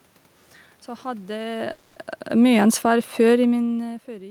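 From 1.34 to 3.92 s, automatic gain falling lowers the level by about 7 dB. Speech and room noise sink together, and the waveform envelope tapers steadily. From 1.71 to 1.98 s, a call audio freeze stretches the last sound into a fading 250 ms buzz or hiss, likely from delayed packets emptying the jitter buffer. On the spectrogram this shows as smeared, flat horizontal bands before speech resumes intact.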